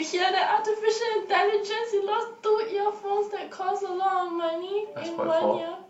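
Nothing in this recording of speech stood out as a technical problem on listening.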